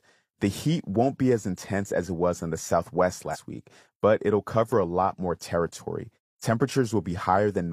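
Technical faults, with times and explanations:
3.30–3.37 s, compressed frames skipped: about two 46.4 ms frames go missing before "week but it'll cover", so the speech jumps roughly a tenth of a second ahead. Harmonics break abruptly at the join on a spectrogram.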